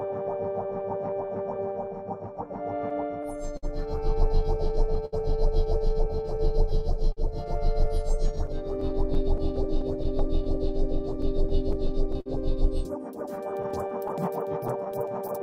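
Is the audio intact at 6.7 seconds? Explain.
No. Clock drift between sender and receiver runs throughout, with the sender's clock about 5 percent slow, so the receiver's buffer keeps draining and short pieces must be stretched.

Repeated timing corrections run from 0.06 to 15.1 s, including this moment. Small repeated slices slow the audio to 98 percent speed and add roughly a third of a second, heard as an unsteady tempo and slight hiccups.

Scattered short gaps begin right at 6.70 s and continue to 12.28 s. There are around twenty small holes, none longer than about 50 ms, each patched by extending the preceding sound. They cause brief ticks and smears.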